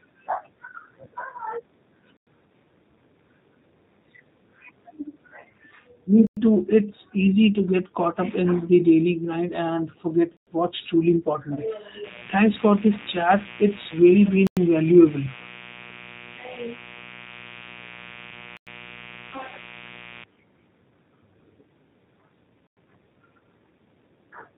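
A speech recording carries G.729 codec damage from start to finish, and it is plainly audible. At 8 kbit/s the codec rebuilds the voice from a vocal tract filter, a pitch predictor and a few pulses per frame. Nothing above 4 kHz survives. The speech sounds dull, rough and synthetic. Hard-edged holes of 100 ms each break the sound at 2.17, 6.27, 10.37, 14.47, 18.57 and 22.67 s. This is a gap between chunks. The audio was handled in 4-second chunks, and silence was inserted at each join. One hole falls after "daily grind and forget", just before "what's truly". Just after "and forget what's truly", from 11.55 to 11.61 s, VoIP packet loss concealed by the speech codec briefly stretches the voice into a buzzy tone or coloured noise that fades. About 20 ms of audio went missing, which fits one lost packet. The decoder filled it by extending its last pitch and filter. A steady, raspy mains buzz runs from 12.04 to 20.24 s. 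It sits about 20 dB below the speech. It is built on 60 Hz, with sharp spikes that spread harmonics well up the spectrum.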